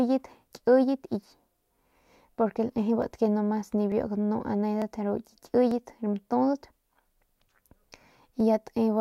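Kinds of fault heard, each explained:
Clock drift buffer slips: a regular click in the speech about every 0.9 s, around ten of them from 0.34 s to 8.40 s, likely from two clocks roughly 700 ppm apart, so a buffer keeps dropping or repeating a few dozen samples.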